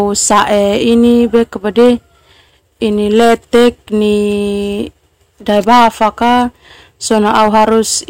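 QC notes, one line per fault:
0.00–1.42 s, 1.78–1.91 s, 2.84–3.69 s, 5.49–6.42 s, 7.11–7.80 s: hard clipping. The speech is driven about 5 to 10 dB past a stage's limit, so peaks are sliced flat, giving harsh high-reaching fuzz with abrupt onset, unlike the rounded, warmer thickening of soft saturation.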